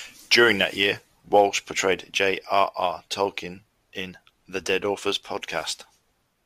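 Sample clock jitter runs through the whole speech clip. The converter's clock wanders, so each sample lands slightly early or late. The timing error is a few microseconds. A wrong sampling instant matters most where the waveform moves fast, so the error follows loud and bright passages. It sits roughly 30 dB below the signal. It sounds like a fine hiss or grit riding on the speech. It disappears in the pauses.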